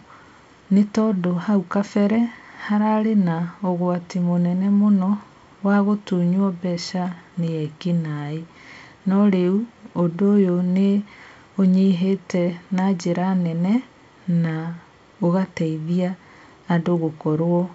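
Nothing stood out on listening to this speech clip, which carries the wideband band-limited character of G.722 telephone coding.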